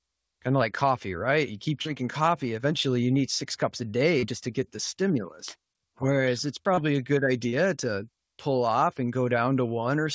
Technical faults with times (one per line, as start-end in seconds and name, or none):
1.82-1.88 short concealed packet loss
4.19-4.25 short concealed packet loss
6.74-6.80 short concealed packet loss
7.49-7.55 short concealed packet loss